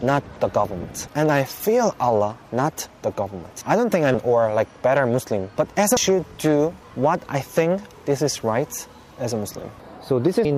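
Three brief bursts of damaged data in a compressed stream break the audio at 4.14 s, 5.97 s and 10.45 s. At each point the decoder hits corrupted bytes, misreads the frame and loses sync, so a tiny chirp or blip replaces the intended sound for a few milliseconds. On a spectrogram each shows as a thin vertical broadband stripe; in the waveform, as an abrupt discontinuity or spiky fragment breaking the signal's shape.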